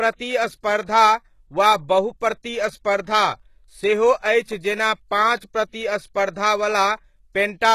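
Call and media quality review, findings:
HE-AAC compression, throughout the speech: plainly audible codec damage, nothing above 12.3 kHz. Likely HE-AAC at a bitrate near 16 kbps: low band coded, treble rebuilt by copying lower bands upward, so harmonics misalign across the crossover.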